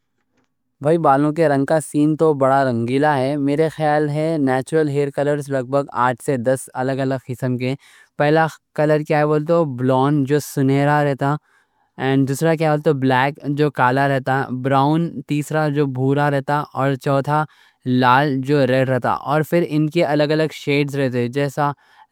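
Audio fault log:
Nothing stood out on listening to this speech recording.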